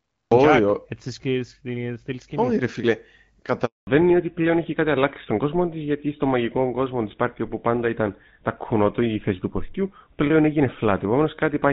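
The capture began late, a cut-off start. The first 0.31 s is digital silence, and at 0.31 s the speech appears abruptly, already mid-sound. There is no rise or natural onset, just a hard edge where the audio switches on partway through whatever was being said. Anything spoken before that moment is missing from the recording.

At 3.65 s the call was passed between networks, and this handover gap lasts 220 ms, until 3.87 s. No speech frames came through while the link changed over. The voice fades out over a few tens of milliseconds and the line then goes silent for roughly a fifth of a second. Whatever was said in that interval is lost rather than muffled.

When the new link comes up at 3.87 s, the call has fallen back to narrowband, and it stays that way to the end. Up to this point, the HD Voice path is audible as clear wideband speech with only light coding roughness, consistent with AMR-WB at about 12.65 kbit/s. 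After the switch, nothing above 4 kHz survives. Sibilants and the airy top of the voice disappear, and the speech turns dull, boxy and rougher, which fits the older GSM full-rate codec.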